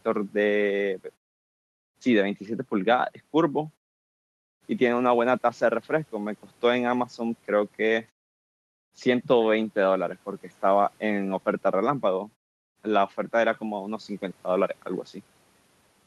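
No technical faults can be heard in this speech.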